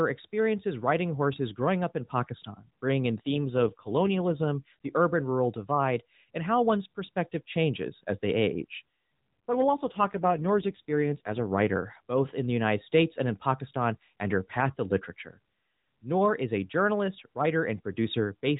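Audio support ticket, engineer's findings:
AMR rate drop, twice: 3.26–4.48 s (after "bringing in", clears by "the urban rural divide") and 9.54–11.47 s (ends before "writer both in the"). Voice goes buzzy, synthetic; band and continuity intact. Sounds like the network pulling AMR-NB down from 12.2 to about 5.9 kbps on a weak link, then restoring it.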